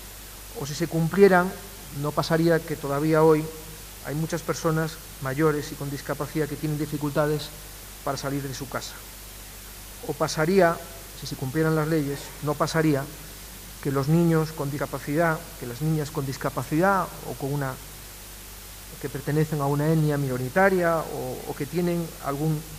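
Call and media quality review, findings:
Audio missing between chunks at 14.79 s. Single skip, about a tenth of a second of sound gone. Both sides joined directly, no silence between. Likely cause: recorder or processor handling audio in 10 s chunks, dropping a short stretch while closing one block and opening the next.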